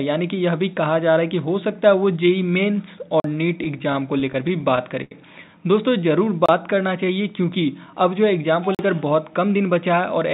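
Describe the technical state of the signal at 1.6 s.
At 1.6 s the signal is intact, with no dropout, glitch or distortion, and the only thing audible is the steady narrowband character of the call path, which carries nothing above 4 kHz, consistent with a G.711 telephone codec.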